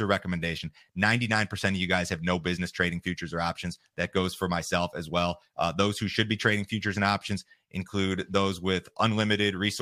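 A short recording of speech, with no technical faults to be heard anywhere in it. There is nothing to time and no cause to trace.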